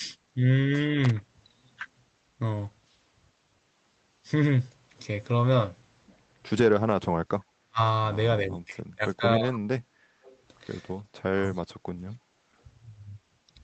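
From 1.04 to 1.22 s a loose connector crackle gives an irregular burst of crackle or scratching. Unlike codec noise, it is erratic and sounds mechanical, not smeared across the sound.

Speech suppressed in double talk follows at 6.92–7.79 s, 8.41–9.69 s and 11.28–11.81 s. The talker dips or breaks into pieces, by roughly 40, 25 and 30 dB at the deepest. The likely cause is an echo canceller turning down its own talker along with the loudspeaker echo while both sides speak. This differs from packet loss, which tends to glitch rather than duck the level.

An echo leak appears at 9.09–9.58 s, 10.23–10.38 s and 11.54–11.59 s. It is a faint copy of the sound trailing by 274 ms, roughly 20, 30 and 35 dB down, most likely residue a loudspeaker-side canceller failed to remove. Its fixed delay separates it from room reverberation.

Background gated by the echo canceller dips the room sound by about 6 dB at 9.97–10.23 s and about 14 dB at 12.20–12.56 s, then restores it.

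The call path's band limit near 8 kHz stays constant throughout.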